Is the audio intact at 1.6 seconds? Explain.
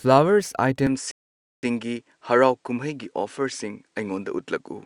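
No. At 1.6 seconds the audio is silent because of a rebuffering stall lasting from 1.11 to 1.63 s. The player ran out of downloaded audio and waited for more, which inserts about 0.52 s of dead air. The speech then resumes exactly where it stopped, so nothing is lost, only delayed. On a waveform this is a flat line. A spectrogram shows a blank vertical band across all frequencies.

The sound around that gap has also changed since 0.87 s. From that point on it is duller, with nothing above 10.4 kHz, and there is a new background noise floor roughly 50 dB below the speech. The loudness stays the same and there is no gap at the change. The likely cause is that the input switched to a poorer device. On a spectrogram this appears as a hard ceiling at 10.4 kHz and a faint haze of noise beneath the speech. The waveform shows no step in level.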